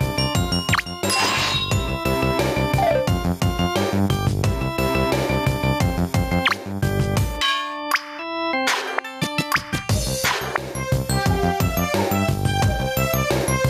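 Loud and quiet passages sit unnaturally close in level and the whole recording sounds squashed from start to finish. This is gain pumping, with the level swinging by roughly 15 dB. The likely cause is input gain set far too high for the microphone, with a fast limiter or compressor clamping down on every peak and releasing in between.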